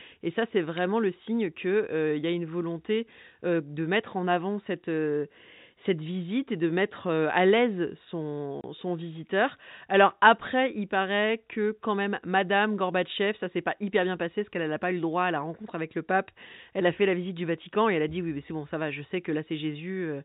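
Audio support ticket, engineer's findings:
Packet loss filled with silence, 8.61 to 8.64 s. 30 ms dropout in the speech, hard edges on both sides. Probable component: network path or receiver jitter buffer. Receiver inserted silence for missing data; gap length fits a single 30 ms packet. Telephone band throughout, nothing above 4 kHz, consistent with G.711 A-law coding; its quantisation noise is at most faint.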